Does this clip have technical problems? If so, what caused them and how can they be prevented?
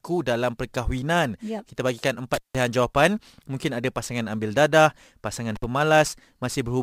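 Yes. The speech cuts out twice, from 2.34 to 2.55 s and from 5.55 to 5.64 s, with crackle at each edge and faint hiss in the gaps of about 170 ms and 57 ms. This is intermittent contact: a loose cable or plug briefly opening the signal line. Checking connectors are fully seated and replacing worn cables prevents it.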